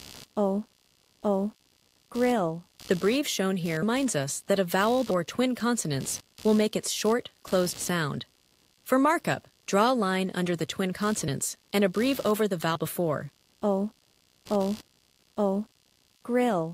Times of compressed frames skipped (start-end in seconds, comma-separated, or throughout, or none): 3.82, 5.10, 11.28, 12.75